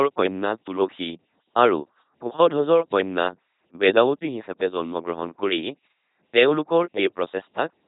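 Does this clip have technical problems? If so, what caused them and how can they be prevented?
Yes. The LPC-10 vocoder buzz runs throughout, with nothing above 3.8 kHz. It is a hard voiced-or-noise switch, unlike the watery smearing of ordinary low-bitrate codecs, and fits a 2.4 kbit/s vocoder. Prevent it by sending the speech through a modern, higher-bitrate codec.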